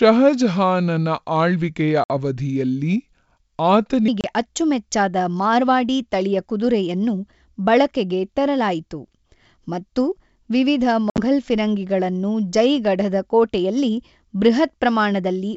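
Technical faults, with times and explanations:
0.00–4.08 s, section at the wrong speed: The opening runs at about 0.76 times its proper speed, so the speech is slowed and its pitch is lowered by roughly five semitones. The voice sounds deep and dragging until the normal rate returns just before "ಅಚ್ಚುಮೆಚ್ಚಾದ ಮಾರ್ವಾಡಿ ತಳಿಯ ಕುದುರೆಯನ್ನು". Because tempo and pitch fall together, this was likely caused by playback or resampling against the wrong clock rather than by any time-stretching process.
2.04–2.11 s, 4.21–4.30 s and 11.10–11.19 s, packet loss on an ADPCM call: Packets are lost on the G.722 link, and each gap is filled with silence. At 2.04 s about 60 ms drops out, inside the slowed section. At 4.21 s a 30 ms hole falls just before "ಅಚ್ಚುಮೆಚ್ಚಾದ ಮಾರ್ವಾಡಿ ತಳಿಯ ಕುದುರೆಯನ್ನು". Between "ಮತ್ತು ವಿವಿಧ" and "ಫಿರಂಗಿಗಳನ್ನು ಜೈಗಢದ ಕೋಟೆಯಲ್ಲಿ ಬೃಹತ್", about 70 ms is lost across 80 ms, with a longest run of 60 ms. 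After each hard-edged gap, the decoder's adaptive predictor and step size no longer match the sender's. As a result, the speech comes back slightly distorted before it settles within tens of milliseconds.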